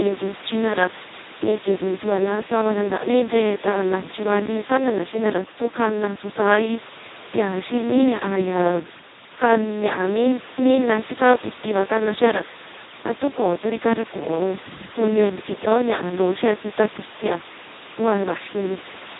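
Throughout, the speech sounds hoarse, buzzy and robotic, with nothing above 3.8 kHz. This is heavy Speex codec damage, consistent with roughly a 2 kbps setting.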